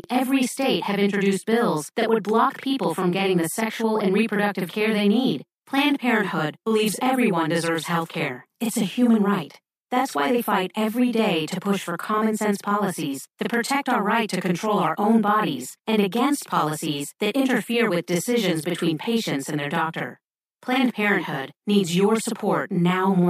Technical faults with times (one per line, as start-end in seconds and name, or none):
0.00-23.29 channel delay (doubling)